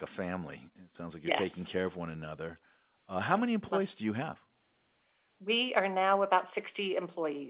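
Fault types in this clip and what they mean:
No fault types are present in this clip.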